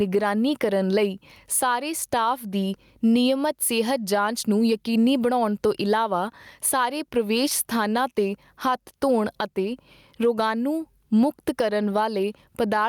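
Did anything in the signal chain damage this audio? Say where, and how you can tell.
Yes. Gain pumping runs throughout, at the input stage: the background swells between sounds and ducks around 15 dB under each loud one, likely overdriven gain hitting a fast limiter.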